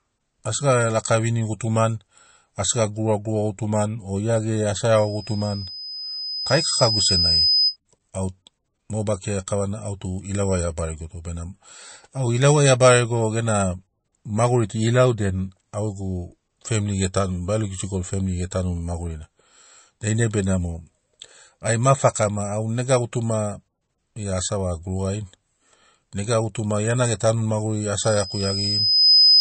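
From start to finish the speech has a hard ceiling at 8.4 kHz and a watery, swirling texture on sibilants, most likely MP3 compression at a low bitrate near 35 kbps. The encoder discards treble and flickers weak detail on and off, unlike plain low-pass filtering, which stays smooth.

From 4.96 to 7.77 s a loudspeaker feedback squeal appears: a single 5 kHz tone swells over roughly two seconds to sit around 5 dB above the speech. A second squeal at the same pitch runs from 27.99 s to the end at 29.40 s, building in about a second to around 10 dB above it. In each case the microphone re-amplifies its own loudspeaker output at 5 kHz. Unlike a steady interference whine, it grows by itself.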